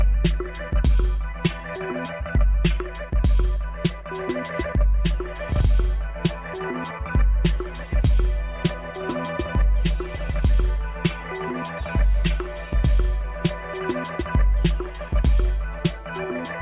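No technical fault can be heard anywhere in the audio, and the signal stays steady and intact from its opening moment to its final one.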